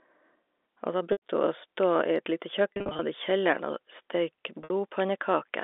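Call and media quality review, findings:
Packet loss with pitch repetition at 1.12–1.20 s, 2.74–2.99 s and 4.62–4.70 s. Held, buzzy repeats. Receiver concealment loops last pitch period and fades it. Losses 100 ms, 170 ms scattered over 260 ms, 70 ms. Narrowband G.711 path audible.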